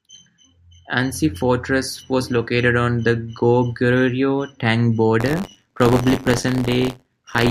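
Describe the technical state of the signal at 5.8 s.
At 5.8 s you're inside a stretch of buffer tearing that runs from 5.20 s to the end. Writer and reader have slipped, so a small slice of each period, around 7%, replays audio about 30 ms old, giving a robotic 93.8 Hz buzz that fits a 512-sample buffer.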